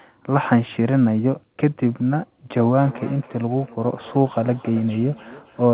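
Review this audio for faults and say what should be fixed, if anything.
Feedback echo between two devices runs from 2.63 s to 5.73 s. The audio repeats roughly every 300 ms, about 20 dB down. A nearby device plays the call into the other's microphone. Keep one device per room on the call, or use headphones.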